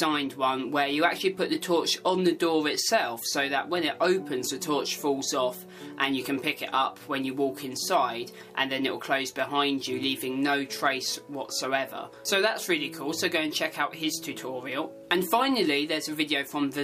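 Clock drift buffer slips run from 0.49 s to 16.51 s: about ten short clicks recur every 1.78 s while there is signal. The likely cause is two devices running on separate clocks that disagree by something like 100 ppm, so the buffer between them gradually fills or drains until a small block of a few samples is dropped or repeated. Each such jump breaks the waveform's continuity, producing the regular tick heard across the clip.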